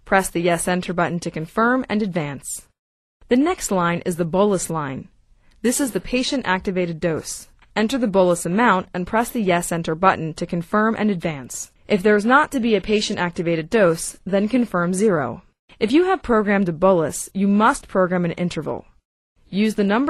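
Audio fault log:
No fault found in this clip.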